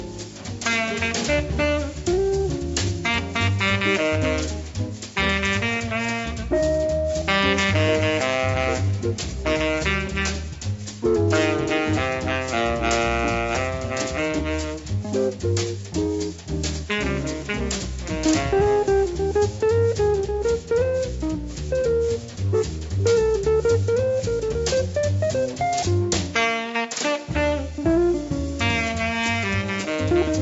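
Nothing in this recording stands out as a technical fault at any point, so there's nothing here to flag.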